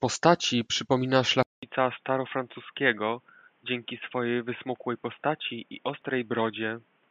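At 1.43 s the speech goes silent for about 200 ms, then returns duller, boxier and somewhat quieter, with nothing above 3.6 kHz and a new, faint background noise until the end. The likely cause is an input switched to a poorer device, one with a narrower band and a different tone.

At 6.02 s a tiny skip comes from an overlap between stream segments. Two segments claimed the same moment, and the player trimmed about 6 ms of speech that was never really doubled, so the waveform jumps.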